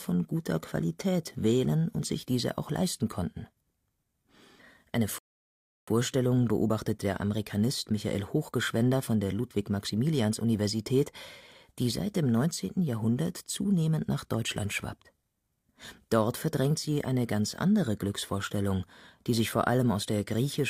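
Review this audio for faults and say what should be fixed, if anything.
A rebuffering stall runs from 5.18 to 5.88 s: the speech cuts to silence for 0.69 s, then resumes exactly where it stopped, at "beobachtet der". Unlike a dropout, nothing is missing; the playback simply waited for more data, adding time. A larger playback buffer or adaptive bitrate switching would prevent it.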